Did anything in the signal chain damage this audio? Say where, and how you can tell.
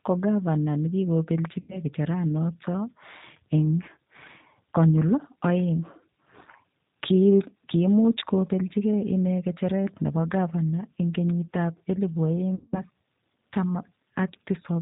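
Yes. At the codec stage, G.729 coding at 8 kbit/s runs throughout: speech sounds rough and synthetic, and a spectrogram shows a hard ceiling at 4 kHz.

At the network stage, VoIP packet loss concealed by the speech codec occurs at 1.60–1.82 s and after "elibu oeng" at 12.55–12.82 s, with about 90 ms and 180 ms lost. The decoder extends its last pitch and filter into a fading buzzy tone or coloured noise, which shows as smeared, flat harmonics tapering in the spectrogram.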